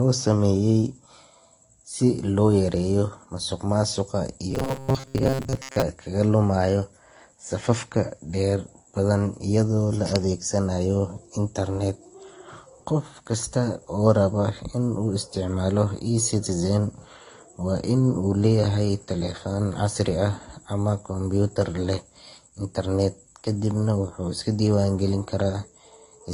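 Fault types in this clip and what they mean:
Transcoding between lossy codecs: The whole clip shows two layers of compression artefacts at once, the artefacts of both codecs heard together. This likely comes from encoding with one lossy codec and re-encoding with another, which fits a low-rate AAC pass followed by Vorbis. The second encoder spends bits reproducing the first one's damage, and the lower bandwidth limit in the chain persists.
Robotic sound from repeated short buffers: From 4.51 to 5.82 s the speech becomes a rigid, metallic buzz locked at 134 Hz while still loosely tracking the syllables. This is likely caused by audio arriving too infrequently, with playback looping the last short block to cover the gap. The 134 Hz buzz fits a repeated block of about 7.5 ms. Most of that stretch is repeated material, and the real audio underneath is lost.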